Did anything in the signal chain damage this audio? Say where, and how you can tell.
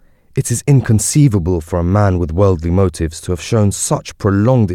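Yes, at the sample-rate conversion stage: a resampler restarted on every block. A 25 Hz tick-buzz runs throughout, one tick every 40 ms, from a 48 kHz to 44.1 kHz converter working in 40 ms blocks. Each block's edges lack their true neighbours. Unlike hum, it vanishes in silent pauses.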